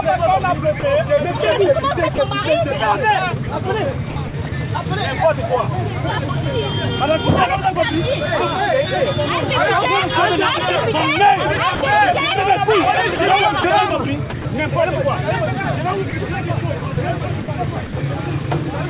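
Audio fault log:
0.80–0.83 s, 2.15–2.18 s, 11.75–11.81 s and 16.10–16.13 s: sound dropped by the voice detector. Each time the sound briefly gives way to steady noise or near silence and then returns. The gap lasts 30 ms, or 60 ms at 11.75 s. The likely cause is the sender's voice detector judging that moment to be background and pausing transmission. The receiver then filled the gap with synthetic comfort noise until the detector triggered again.
4.10–4.52 s, 13.16–13.64 s, 14.30–14.45 s and 16.79–17.93 s: sound chopped by the voice detector. Within each stretch the audio turns choppy, with pieces cut away. The replaced portions add up to 150 ms, 60 ms, 60 ms and 180 ms respectively. This likely comes from the sender's voice detector switching on and off more than once, with comfort noise filling each moment it stopped sending.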